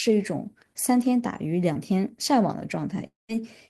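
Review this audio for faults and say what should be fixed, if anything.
A short concealed packet loss occurs at 1.73–1.77 s, where about 20 ms of audio never reached the decoder. Concealment extended the preceding sound, then blended back into real speech, leaving a brief smear. A larger jitter buffer or forward error correction would prevent it.

From 3.07 to 3.31 s, the last sound is stretched into a fading buzz or hiss, then about 160 ms of silence follows before speech resumes with roughly 220 ms missing. The likely cause is a long network dropout. Redundant transport or retransmission on the network path would prevent it.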